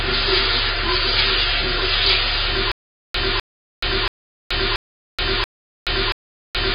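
Throughout, the sound is dull and smeared, with nothing above 5 kHz and a warbling, fizzy texture: heavy AAC compression, likely AAC-LC at around 16 kbps. From 2.72 s to the end, a 254 ms burst repeats six times, every 0.68 s, separated by 426 ms of digital silence. This stutter with silent gaps was likely caused by a stalled stream replaying its last fragment, with the audio that should have played lost.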